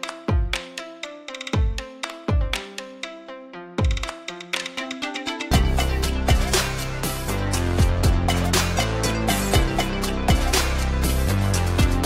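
At 11.29 s there's a block of digital silence, about 2.9 ms of zeros, consistent with a 128-sample buffer not filled in time, heard as a brief tick.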